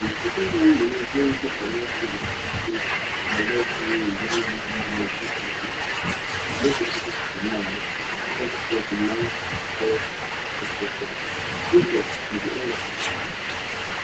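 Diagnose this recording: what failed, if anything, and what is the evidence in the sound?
Speech suppressed in double talk, from 0.0 to 5.62 s, in the call processing stage. During this stretch the talker's level repeatedly sags, at its deepest by about 10 dB, for around two seconds in total. The likely cause is an echo canceller that, with both ends active, could not tell near speech from loudspeaker echo and attenuated everything together.

Echo leak, from 0.0 to 6.47 s, also in call processing at the loudspeaker end. A faint second copy of the speech trails the original by 355 ms, sitting about 15 dB below it, audible as a ghostly repeat over the opening seconds. This is likely residual echo that the far end's canceller failed to subtract, so its microphone returned the played-back signal down the line. The echo shares the call's band limit, with nothing above 8 kHz.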